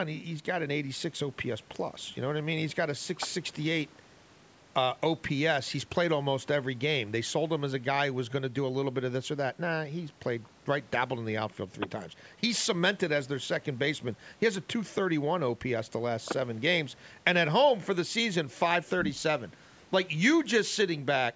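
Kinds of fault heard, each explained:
No faults detected; the speech shows only the expected call microphone processing, with the lowest bass trimmed and nothing above 8 kHz.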